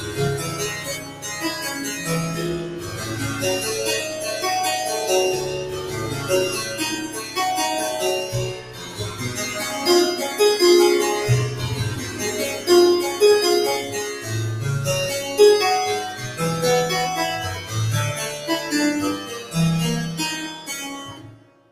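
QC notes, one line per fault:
Throughout: noise suppressor applied to music or sounds. A speech-tuned suppressor keeps misreading sustained content and ambience as noise, so gain swings by about 10 dB, leaving the sound pumping and thinned as held parts and tails get pulled down.
0.00–3.07 s, 5.85–9.21 s, 12.05–14.28 s, 16.22–17.71 s, 19.24–21.71 s: sound cut by the noise suppressor. Steady and decaying passages sink while sudden onsets pass, with drops of about 9, 9, 7, 5 and 10 dB. Roughly a second is affected in each of the first two spans, less in the next two.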